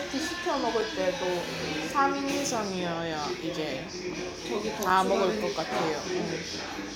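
A short clip of sounds with two blocks of digital silence, at 0.81 s and 4.90 s, each about 5.3 ms long. The sudden drop to silence and back gives a tick at each. The length fits a 256-sample buffer missing its deadline.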